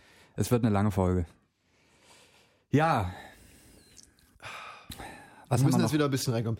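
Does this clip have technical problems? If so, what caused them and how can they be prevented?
No, this clip has no technical problems, so there is nothing to prevent.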